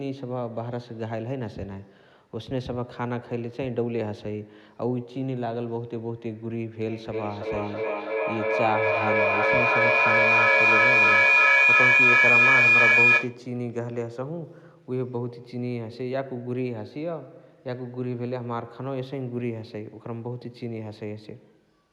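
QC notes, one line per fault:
6.87–13.47 s, feedback howl: a microphone is picking up a nearby loudspeaker on the same call, and each pass around that loop returns louder than the last, so the sound regenerates instead of dying away. The repeats collapse onto the frequency the loop favours, leaving a piercing tone around 2 kHz, with a loop round-trip delay of roughly 300 ms, that peaks about 11 dB above the speech before cutting off.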